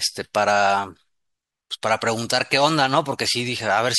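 No technical faults can be heard anywhere in the speech recording. There is no event here that calls for a time or an explanation.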